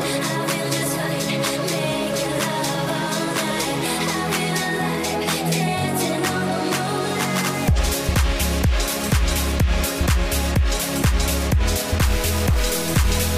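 From 12.02 s to the end at 13.37 s, harsh buzzy distortion takes over, with steps of roughly -25 dBFS, likely a stuck bit in the converter or data line.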